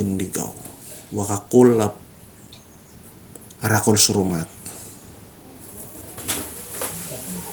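No technical faults can be heard anywhere in the speech.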